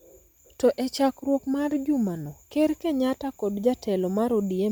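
A breathy, grainy edge runs through the speech from start to finish, with the upper spectrum sounding noise-filled and nothing above 20.2 kHz. This is likely Bluetooth LC3 compression, its 10 ms transform frames squeezed to a rate that fits 48 kbps.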